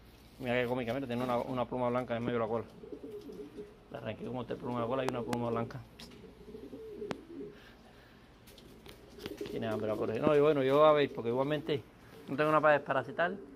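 Loud pops hit at 2.28–2.30 s, 5.09–5.35 s (a double), 7.11–7.13 s and 10.27–10.29 s, sharp thumps well over the sound, roughly 15 dB for the first and 20 dB after. Each is likely a voltage spike from a plug, switch or static.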